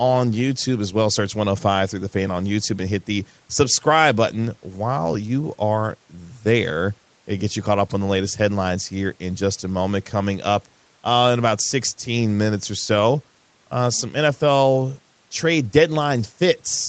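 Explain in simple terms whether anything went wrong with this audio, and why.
Listening through this speech, nothing stood out as having gone wrong, and the only thing to notice is the slightly narrow, phone-like sound that comes from the normal call processing it passed through.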